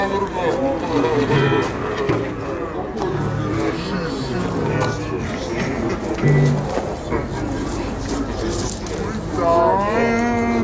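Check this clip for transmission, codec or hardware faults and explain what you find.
One fault, running the whole way through: a wrong sample rate. The audio plays at 0.667 speed and 7 semitones low, which fits 24 kHz material clocked out at 16 kHz without conversion, so tempo and pitch sink together into a slow, heavy drag.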